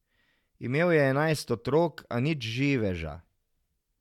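No technical faults can be heard anywhere in the recording; the signal stays intact throughout.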